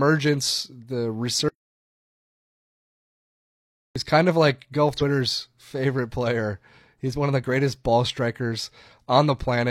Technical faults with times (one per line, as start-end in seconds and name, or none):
1.49-3.96 audio dropout to silence
4.97-5.02 damaged data in a compressed stream